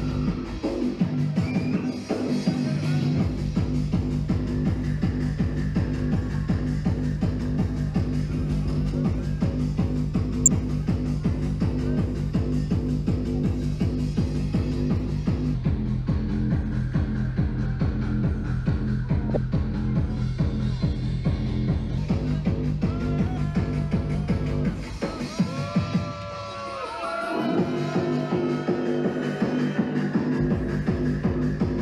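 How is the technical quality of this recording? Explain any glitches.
The recording has two audible problems: damaged codec frames and a stretch played at the wrong speed.

A corrupt frame was decoded at 10.46 to 10.48 s and again at 19.30 to 19.37 s. Flipped bits in the compressed data made the decoder rebuild energy at the wrong frequencies. The first hit spans about two frames and peaks near -5 dBFS. It is a brief glitch. The second covers roughly four frames, peaking near -10 dBFS. It is a longer, softer glitch.

From 15.54 to 21.98 s, the section is at the wrong speed. It runs at 0.849 times normal speed, so the audio drags and drops about three semitones in pitch. Pitch and tempo shift together at the boundaries, which makes the change abrupt. The likely cause is a player or editor fitting this part to the wrong clock. The second frame error falls inside this slowed stretch.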